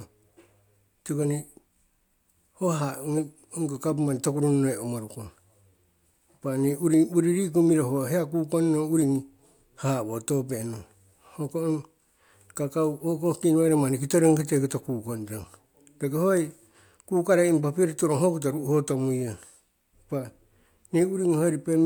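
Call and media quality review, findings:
No audible faults found in the speech; nothing to attribute to the capture, network or playback path.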